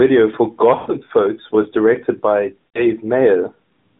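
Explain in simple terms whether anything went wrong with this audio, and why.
Two short stretches sound smeared: around 0.76 to 0.91 s the speech drags out and fades toward silence, and again from 2.69 to 2.87 s, just after "was directed by", it blurs briefly before returning a little weak. These are lost AMR speech frames. Radio errors corrupted pieces of the phone-codec signal, so the decoder kept repeating its last good sound settings while turning the volume down, which fits about 120 ms missing in the first gap and 60 ms in the second.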